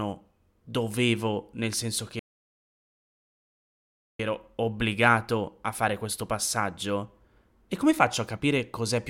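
At 2.19 s the speech just drops out into silence and stays gone for a full 2 seconds, picking back up at 4.20 s. That's a playback stall: the output went dead in mid-flow rather than fading or glitching. Most likely the player starved for data or its audio thread got blocked, so nothing was fed to the output until it recovered, and then the audio carried on from there.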